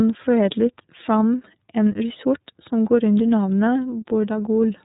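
This speech sounds narrow and boxy throughout, with nothing above 4 kHz, and carries a plainly audible rough, slightly synthetic edge. That is the iLBC codec at work: it codes each 30 ms frame independently, at a rate that fits about 13.3 kbps.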